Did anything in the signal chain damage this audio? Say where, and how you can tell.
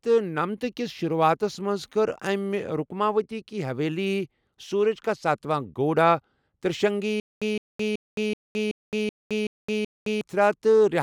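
Yes. From 7.2 s to 10.21 s the speech hits a stutter with silent gaps, likely a playback or stream stall. A burst of about 162 ms repeats 8 times, each followed by about 216 ms of digital silence, a steady 378 ms cycle. The player kept replaying its last fragment and then running dry. On a waveform this shows as identical blocks separated by flat silent lines, and on a spectrogram as repeated slices with fully blank columns between them. The speech that should have filled that span is lost.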